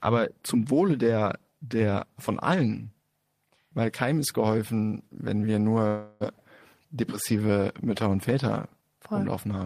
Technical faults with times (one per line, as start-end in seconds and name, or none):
5.87-6.23 call audio freeze